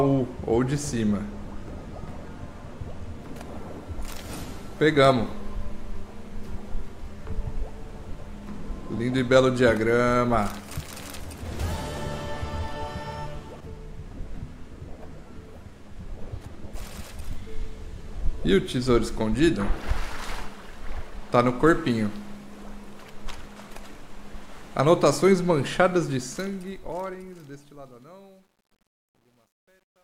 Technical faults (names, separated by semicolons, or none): truncation distortion on a fade